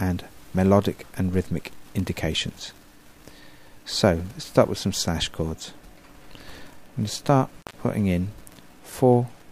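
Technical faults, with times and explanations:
7.58–7.74 s, intermittent contact: a loose connection opens for 119 ms, dropping the sound to faint hiss, with crackle as the contact breaks and remakes. The waveform shows a near-flat gap edged by sharp spikes; the spectrogram shows a dark band bounded by broadband vertical streaks.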